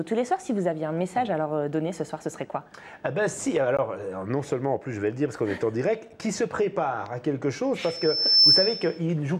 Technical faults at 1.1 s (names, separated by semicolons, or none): none